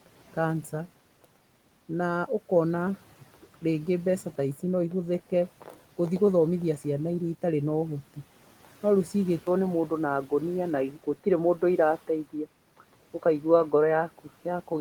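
Input switched to a poorer device at 9.39 s in this speech recording. After an 80 ms silence, the band narrows through to the end, and the sound turns dull and boxy with a level shift of about 5 dB, likely from a change to a narrower-band microphone or headset profile.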